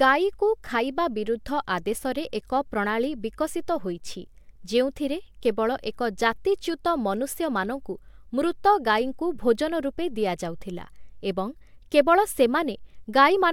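No technical faults are audible.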